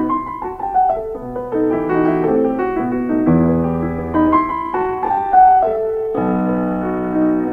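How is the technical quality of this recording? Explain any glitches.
There is one clear glitch. From 4.53 s to the end, a time-stretched section slows the pace abruptly to about 0.55 times normal speed, most likely from software lengthening the audio by repeating short pieces. The sound drags, yet the pitch holds steady. That steady pitch separates it from slowed playback, which would also drop the pitch.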